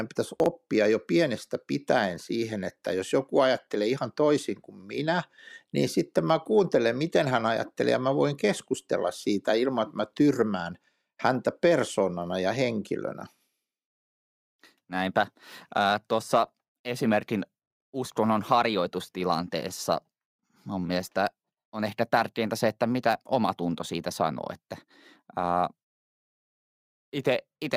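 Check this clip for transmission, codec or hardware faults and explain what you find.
One transmission fault appears near the start. From 0.40 to 0.46 s, just before "jo pienestä pitäen siihen", chunks play out of order: a 20 ms chunk arrives two chunks late, producing a jumbled blip and three visible waveform discontinuities.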